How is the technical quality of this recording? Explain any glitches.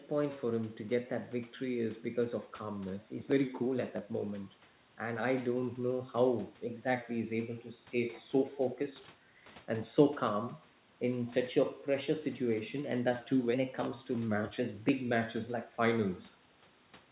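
The technical quality of this recording shows no glitches to explain.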